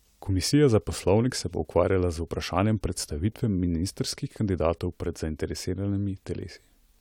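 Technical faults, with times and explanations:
Nothing jumps out here: the speech just runs along without any dropouts, clicks, glitches or odd timing to point to.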